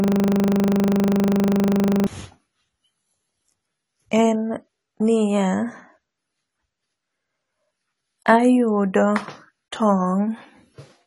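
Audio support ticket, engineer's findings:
System hang loop, 0 to 2.07 s, already running at start: a 40 ms piece of speech repeats exactly, giving a 25 Hz buzz-like stutter as the buffer replays during a freeze.

AAC compression, likely cause, throughout: dull, smeared speech with fizzy sibilants and nothing above 11.5 kHz, which fits AAC-LC at a low bitrate around 32 kbps.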